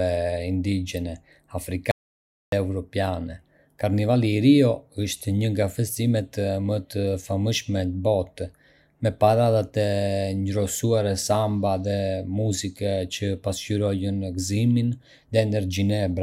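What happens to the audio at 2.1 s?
At 2.1 s the speech falls into an audio dropout to silence lasting from 1.91 s to 2.52 s, so about 0.61 s of material is simply missing. The speech cuts off abruptly and resumes just as suddenly, with no room tone in between. The likely cause is a lost input, such as a disconnected device or a momentary mute, while recording continued writing silence. On a waveform it shows as a flat line; on a spectrogram, a blank vertical band across every frequency.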